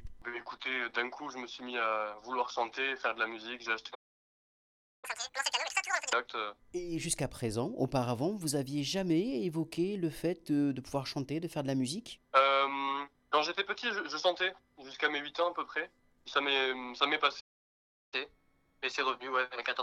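The audio twice falls silent mid-flow in a playback stall, from 3.94 to 5.05 s (about 1.08 s) and from 17.40 to 18.14 s (about 0.72 s). This is most likely the player running out of buffered data or having its output thread blocked. The silence is a pause of over half a second rather than a short click or gap. Each stall is followed by catch-up at higher speed, as the player resamples its backlog to regain the lost time. From 5.05 to 6.13 s it runs at double speed, with pitch raised by around ten semitones. From 18.14 s to the end it runs 1.1 times faster, with pitch up by a semitone or two. A fixed sample-rate mismatch would shift pitch for the whole clip, but here the rise comes only after a stall, and the first speed-up drops back to normal once the backlog is cleared.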